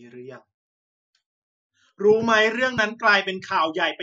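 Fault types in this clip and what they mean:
Overlap between stream segments: two stream segments claim the same stretch of time, so the player trims the overlap and about 11 ms of genuine speech disappears. The waveform jumps across the gap, producing a single small click or skip at 2.78 s.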